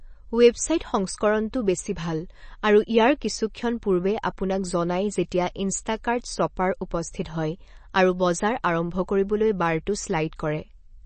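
From start to finish the speech sounds watery and swirly, with plainly audible damage: sibilants break into metallic chirps, consonant onsets smear, and nothing is heard above about 8.3 kHz, giving a dull, capped treble. The likely cause is MP3 compression at a starved bitrate, which fits an encode around 32 kbps. Short of bits, the encoder cuts the top band at a fixed point and drops weak frequency lines that flicker on and off between frames.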